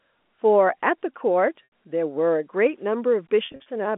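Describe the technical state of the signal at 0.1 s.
At 0.1 s the signal is intact, with nothing beyond the narrow 200 Hz to 3.5 kHz telephone band of its G.711 line coding, which carries the speech as designed.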